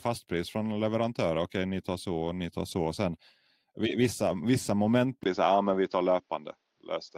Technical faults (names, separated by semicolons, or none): lost packet rebuilt from error correction; input switched to a poorer device